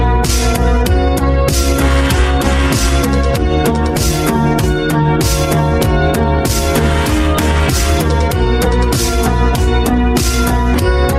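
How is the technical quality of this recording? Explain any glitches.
No glitches or technical faults can be heard anywhere in this recording. Nothing interrupts or degrades the sound at any point.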